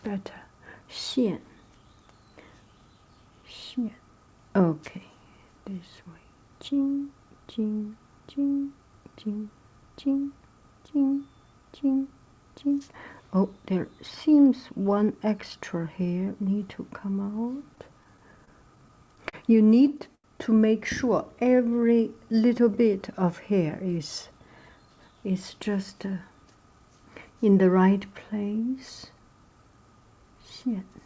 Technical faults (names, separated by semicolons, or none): repeated stalls (stutter); short stall from a late packet; jitter buffer slow-down; jitter buffer speed-up